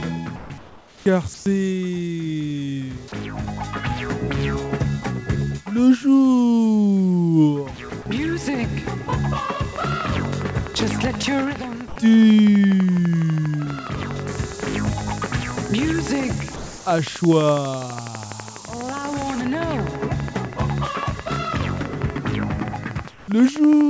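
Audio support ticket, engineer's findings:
Sound dropped by the voice detector: sender VAD likely misjudged quiet sound as background and stopped transmitting, with comfort noise filling in. Sound cuts to steady noise at 0.36–0.50 s (about 50 ms lost), again at 7.90 s and 8.02–8.06 s, then resumes.

Comfort noise in place of the background: DTX likely active during pauses, with receiver generating synthetic noise instead of the real background. Detail-free steady hiss at 0.58–1.06, 1.34–1.46, 11.88–11.96, 16.56–16.86 and 23.08–23.28 s, mostly about 2–5 dB quieter than the true background.

Train of clicks: likely interference or a faulty connection injecting pulses from 9.76 s to the end. Regular ticking at about 12 per second, similar-shaped pops standing clearly above the program, audible through pauses too.

Low bit depth with noise shaping: signal reduced to 4 bits from 14.28 to 19.41 s, with rounding error pushed upward in frequency. 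Thin, steady hiss roughly as loud as the sound itself, climbing toward the top of the band, which stops at 8 kHz on this G.722 path.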